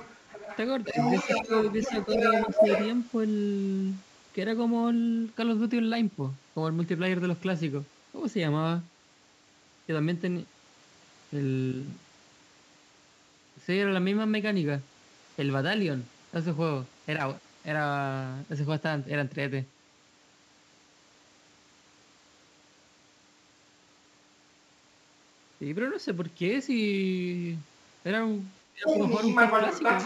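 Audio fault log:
Throughout: sample clock jitter. A faint hiss and roughness rides on the speech. It grows on loud passages and bright, sharp sounds, and it disappears in the pauses. The converter's clock wanders by a few microseconds, so each sample is taken slightly off time. Steep parts of the waveform turn that timing error into a level error. The result sits around 35 dB below the speech, which is low.
0.0 to 0.57 s, 0.84 to 3.0 s, and 28.85 s to the end: other side's voice leaking through. A second voice comes through alongside the talker. At first it is about 15 dB lower. From 0.84 s it is roughly as loud as the talker. In the final stretch it is about 5 dB louder. The likely cause is the far end playing from a loudspeaker into the talker's microphone, with the echo canceller failing to remove it.
0.92 to 0.96 s, 1.46 to 1.51 s, and 28.69 to 28.88 s: speech suppressed in double talk. 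The talker's level dips briefly. The first two dips are short, lasting 40 and 50 ms, by about 5 and 10 dB. The last dip is longer, at 200 ms, and deeper, near 20 dB. It sounds like a bite out of the speech. The likely cause is the echo canceller turning everything down when both sides spoke together.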